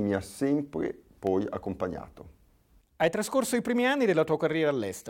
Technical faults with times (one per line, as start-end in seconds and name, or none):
0.74-1.80 CD scratch ticks